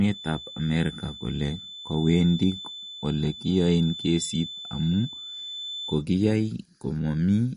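Speech with plainly audible MP3 compression damage throughout. Nothing remains above 10.6 kHz, and the sound has a watery, swirling quality as weak frequency lines drop in and out between frames, which fits a low bitrate around 40 kbps. Unlike simple low-pass filtering, the shifting texture gives it away. From 0.0 to 6.06 s a thin feedback whistle sits at 3.5 kHz, well below the speech and swelling and fading slowly in level, most likely from a loudspeaker-to-microphone loop held just short of runaway. It is not a fixed electrical tone, and it never builds into a howl.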